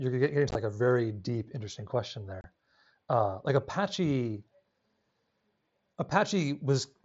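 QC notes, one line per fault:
0.49–0.55 s, unconcealed Bluetooth headset packet loss: just before "like a very deep", about 37.5 ms of audio drops out across 60 ms in gaps of up to 15 ms. Each missing headset packet is replaced by silence or an idle pattern rather than patched, so the sound breaks into a short, chopped crackle with abrupt edges.
2.41–2.44 s, unconcealed Bluetooth headset packet loss: right after "very deep interesting question", a 30 ms hole opens in the wideband mSBC stream. No concealment fills the lost packets, so the sound cuts out and comes back abruptly.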